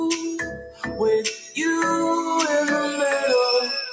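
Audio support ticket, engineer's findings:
Pumping, fluttering level across the whole clip, swings of around 10 dB. Noise suppressor applied to music or sounds: speech-tuned suppressor treating sustained content and tails as noise.

Level sinks at 0.38 to 1.0 s, deepest about 15 dB, and again at 1.35 to 1.56 s, about 8 dB. Sound cut by the noise suppressor, with held portions misjudged as noise and attenuated. Call microphone processing audible as nothing above 8 kHz.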